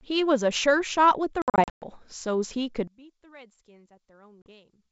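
At 1.42 to 1.84 s there's packet loss on an ADPCM call: about 280 ms of speech is punched out as hard-edged silent gaps spread over 400 ms, the longest about 120 ms. Because the decoder's predictor and step size drift away from the sender's, the speech comes back slightly distorted before settling.

From 2.88 s to the end, the speech suddenly drops by about 26 dB and turns faint. That sounds like a stereo mix folded to mono with one channel likely inverted, so the material common to both channels cancels and only their small difference remains.

Another short packet-loss hole, about 40 ms, hits at 4.42 to 4.51 s, with the same brief mistracking as the decoder recovers.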